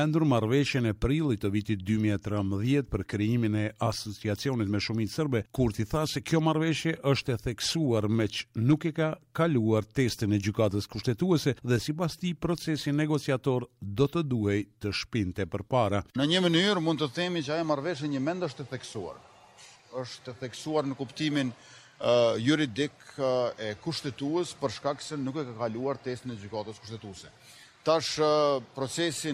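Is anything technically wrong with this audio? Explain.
No, nothing stood out as technically wrong when listening to this audio.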